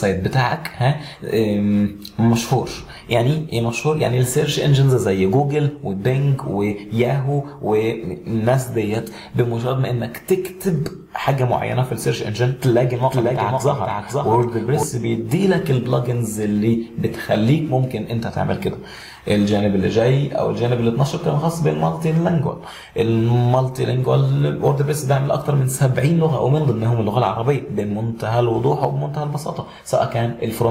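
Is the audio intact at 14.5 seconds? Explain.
No. At 14.5 s the clip carries a doubled audio track, running from 13.03 to 14.83 s. A second, full-band copy of the same sound trails the original by about half a second, around 5 dB quieter, with no decay or room colour, and it starts and stops abruptly. The likely cause is a slower capture path or an edit holding two copies out of step. On a spectrogram, every pattern repeats intact half a second later; the waveform shows overlapping, offset envelopes.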